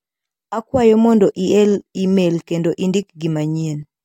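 No technical faults can be heard in this speech recording.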